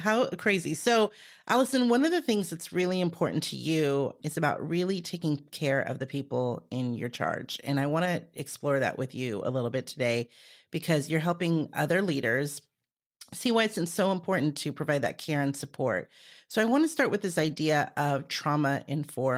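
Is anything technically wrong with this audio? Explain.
Yes: lost packets rebuilt from error correction at 2.81–2.91, 8.05–8.07, 12.37–12.39, 15.03–15.09 and 17.39–17.57 s. Each spans 20 to 100 ms of rougher, noisier speech played from a low-bitrate backup copy, with no gap or smeared repetition like plain concealment.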